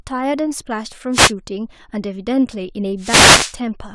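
A short speech recording with two wireless microphone noise hits. The first runs from 1.12 to 1.32 s, a brief swish of static. The second is longer, from 2.98 to 3.56 s. Both come from an analogue FM radio link losing signal. Reflections of the transmitted signal cancel at the receiver, so its own noise rises. The hiss rises for those moments, then clears as the signal returns.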